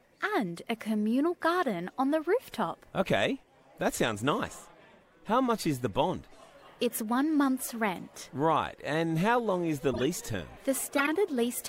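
A short burst of misplaced energy cuts into the sound from 9.93 to 10.03 s, and a second, longer and louder one follows from 10.96 to 11.08 s, peaking around -15 dBFS against about -20 dBFS for the first. Both are corrupt frames decoded: flipped bits in several consecutive compressed frames, roughly four and five, led the decoder to apply wrong gains or misread codes, scattering energy across the wrong frequencies for the span of those frames.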